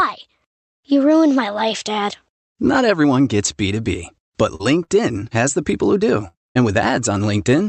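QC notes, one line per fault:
4.55–4.61 s and 4.83–4.90 s, short concealed packet loss: a brief smear or wobble each time. About 40 ms of audio never reached the decoder in time, so the receiver extended the preceding sound across the hole and blended back into the real signal.
6.28–6.36 s and 6.50–6.57 s, burst of packet loss, both after "people who do": a held buzz or fading hiss, then a jump ahead. Lost packets left gaps of 62 and 54 ms, filled by continuing and fading the last sound. Each time about 60 ms of real audio is gone.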